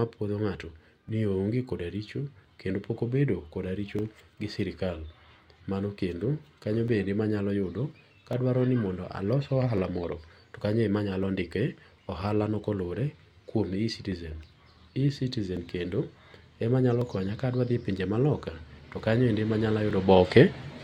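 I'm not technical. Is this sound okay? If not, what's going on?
No. From about 1.09 s to 19.91 s there is a click roughly every 1.45 s, about fifteen in all, heard while the speech is playing. This is clock drift buffer slips. Two pieces of equipment are likely running on slightly different internal clocks, off by roughly 500 parts per million. The difference slowly builds up until a tiny chunk of sound, a few dozen samples, is skipped or repeated, causing each click.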